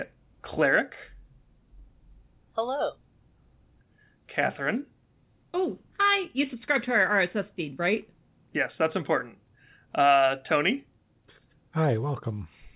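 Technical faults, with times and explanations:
No technical faults are heard in this speech.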